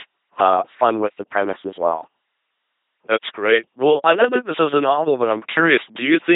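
Throughout, the speech buzzes robotically with nothing above 3.8 kHz: heavy LPC-10 vocoder damage, each instant rebuilt from pulses or hiss, fitting 2.4 kbit/s coding.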